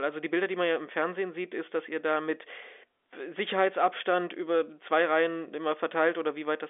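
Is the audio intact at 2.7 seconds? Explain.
Yes, at 2.7 seconds the speech runs on without any dropout, click or distortion, carried through the G.711 telephone coding with its usual narrow band that stops at about 3.7 kHz.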